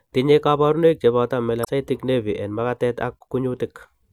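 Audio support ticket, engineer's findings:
Damaged data in a compressed stream, 1.61–1.69 s. Corrupt bytes in the encoded speech; decoder misreads the frames, loses sync, hunts for the next valid header. Result: an 80 ms glitch.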